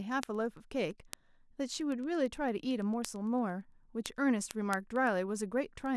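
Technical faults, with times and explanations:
0.12–5.86 s, word clock ticks: around fifty sharp ticks, roughly one per tenth of a second, as an unlocked receiving clock slips and drops or repeats single samples.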